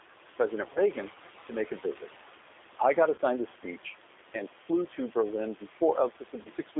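Throughout the clip, noise suppressor artifacts are audible: the room noise, sitting about 18 dB below the speech, is pulled down by about 11 dB band by band and frame by frame. Unlike a gate's hard on/off switching, the noise sinks between the words and rises under them.

The whole clip is also carried by the G.729 codec at 8 kbit/s, with nothing passing outside a 300 Hz to 3.6 kHz line band. Simple band-limiting would only sound muffled and thin. Here the voice is also plainly rough and synthetic, and the background warbles, because the codec rebuilds the voice from a filter and a few pulses.

VoIP packet loss concealed by the speech codec occurs at 0.73 to 0.79 s, at 3.15 to 3.20 s between "I got" and "the speech and flew", and at 6.42 to 6.49 s. Each gap covers about 30 ms of audio, which points to a single lost packet. A plain dropout would leave silence. Here the decoder stretches the last sound into a buzzy tone or coloured noise that fades, and the voice stays weak briefly after each gap.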